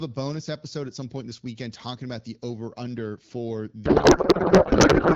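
From 3.85 s to the end of the speech clip, the voice gives way to garbled noise and warble that barely tracks it. This is a codec payload misread: AMR-WB frames packed octet-aligned are being unpacked as bandwidth-efficient, so every field lands in the wrong bits. Before that, the HD Voice coding is clear, consistent with roughly 12.65 kbit/s.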